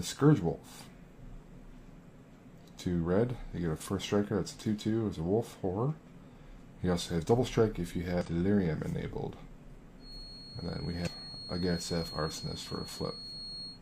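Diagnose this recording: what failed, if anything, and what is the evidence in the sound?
Two short bursts of damaged data in the compressed stream sit at 8.21 to 8.26 s and 11.03 to 11.08 s, each roughly 45 to 50 ms long. Each is a brief glitch in the sound. This is a codec or storage-stage fault. Corrupted bytes make the decoder misread the frames, lose sync and skip forward to the next valid frame header, which produces the artefact.

From 9.97 s to the end of the clip, a thin, steady tone at 4.3 kHz runs behind the sound, about 15 dB below it, swelling and fading slowly in level. This is a feedback whistle, most likely from the acoustic loop between loudspeaker and microphone in the analogue capture path. The loop gain sits just at the edge of instability at that frequency, so the tone sustains without building into runaway howl.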